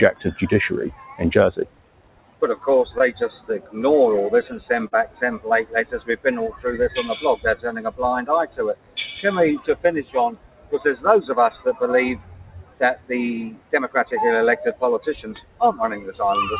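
A noise suppressor designed for speech stays active across the whole clip. It treats sustained tones, ambience and decaying tails as noise and pulls them down, so the level swings by roughly 20 dB and the sound pumps and thins as held material sinks while attacks pass. The call path itself caps the bandwidth at 4 kHz, which fits G.711 A-law at 64 kbps.

The sound cut by the noise suppressor first shows from 0.13 to 2.67 s, dipping about 18 dB. At 2.98 to 3.01 s comes a short concealed packet loss: about 20 ms of audio never arrived, and the receiver extended the preceding sound to fill 13 ms before blending back. It registers as a tiny smear. The suppressor clamps down again from 3.59 to 3.76 s, by about 14 dB, hollowing that moment.

A second concealed packet loss at 4.87 to 4.93 s replaces 40 ms with synthesized continuation. That longer patch gives a wobble.

After that, the sound cut by the noise suppressor recurs at 5.06 to 6.65 s (about 17 dB), 7.36 to 8.97 s (about 18 dB), 9.74 to 10.75 s (about 18 dB), 11.70 to 13.73 s (about 18 dB) and 15.40 to 16.09 s (about 17 dB). 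In each stretch, steady and fading parts drop away and tails are cut short, while sharper onsets survive, so the sound keeps breathing in and out.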